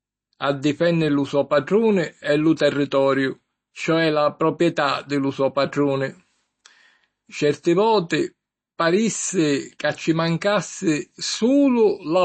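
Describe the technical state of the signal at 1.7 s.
MP3 compression artefacts are present at 1.7 s, as they are across the whole speech clip. Nothing reaches above about 8.3 kHz, and the sound has a plainly audible watery, swirling quality, with s sounds turning metallic and attacks smeared. The likely cause is an MP3 encoder short of bits, which fits a bitrate around 32 kbps: it cuts the treble at a fixed point and zeroes weak frequency lines that flicker on and off between frames.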